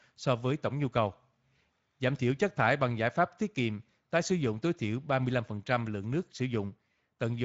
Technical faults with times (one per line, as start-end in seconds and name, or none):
0.00-7.44 Speex codec